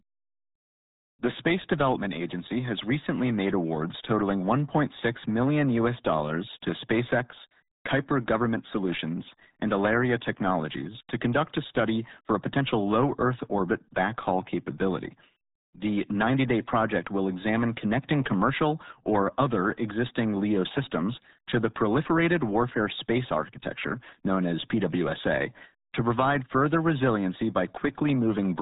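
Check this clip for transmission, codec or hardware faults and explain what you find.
The speech carries one codec fault, present for the whole clip: the RealAudio 14.4 codec.

From start to finish, nothing passes above 3.8 kHz, and the damage is heavy. The audio was squeezed through RealAudio 1, a low-rate speech coder built for dial-up modems, and the result fits an 8 kbit/s stream. The coder keeps only a coarse model of each short frame, so the speech sounds muffled and gargly. On a spectrogram, energy stops at a hard shelf near 3.8 kHz, with smeared, blotchy harmonics below it.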